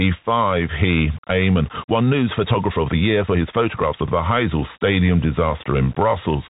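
Across the whole clip the speech sounds boxed-in and phone-like, with a fine granular hiss beneath it and scratchy, gritty s sounds, while louder bright syllables break up. Nothing above about 3.8 kHz comes through. This is the Bluetooth CVSD headset codec, which codes each sample as a single up-or-down bit at a rate that fits 64 kbps, with an adapting step size. Sharp, loud high content outruns that step, leaving the distortion.

From 1.52 s to 4.08 s the pace of the speech suddenly jumps, running about 1.41 times faster while the pitch stays the same. That stretch sounds rushed. It is likely a time-stretched section, where software squeezed the audio to fit a shorter length and kept the pitch by cutting out short pieces, which gives the hurried feel.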